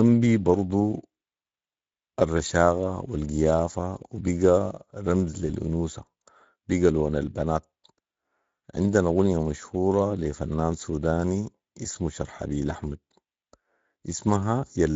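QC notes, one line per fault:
Throughout: Speex codec, hoarse, noisy speech with plainly audible damage, fitting a bitrate of 16.8 kbps. CELP excitation starved of bits, unlike broadband MP3-style smearing.
5.47–5.50 s: VoIP packet loss concealed by the speech codec, a brief, fading smear, consistent with one lost 20 ms frame extrapolated from prior pitch, not a hard gap.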